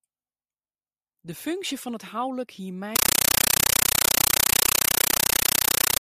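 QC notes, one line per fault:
2.96 to 6.00 s, compressed stream played as audio: the speech is replaced by very loud, chattering static that continues to the end. Encoded data bursts are being treated as ordinary samples without decoding, so each frame plays as about 9.3 ms of noise followed by silence. The bursts repeat 31.25 times a second, which produces the rattling texture and fits an AC-3 stream at 448 kbps passed undecoded over a digital link.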